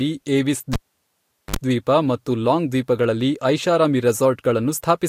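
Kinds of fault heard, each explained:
Cable pulled and plugged in: a live lead gets yanked at about 0.73 s with a pop, the sound drops to near silence for roughly 780 ms, then there's a short 50 Hz mains buzz of about 54 ms as the tip touches, and a second pop at 1.56 s.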